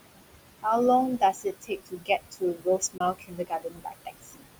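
Noise suppressor artifacts run through the whole speech recording: the suppressor pulls the steady background down by about 20 dB between phrases, so the room noise, which sits only about 11 dB below the speech, pumps as it sinks and returns. Speech cut by the noise suppressor appears from 1.19 s to 4.46 s, where soft consonants and quiet endings, around a second and a half in all, are mistaken for noise and dropped by up to about 21 dB, leaving them faint or swallowed. A Bluetooth dropout, a 21 ms silence from 2.98 s to 3.01 s, is likely one audio packet that missed its deadline to the headphones, after which the sound resumes as though it had kept playing.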